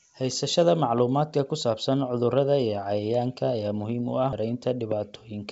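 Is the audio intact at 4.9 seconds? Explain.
No. A loud pop sits at 4.92 to 4.94 s, a single sharp thump roughly ten decibels above the speech, likely from a voltage pulse such as a plug or static. Unlike a dropout, the speech carries on underneath, unbroken.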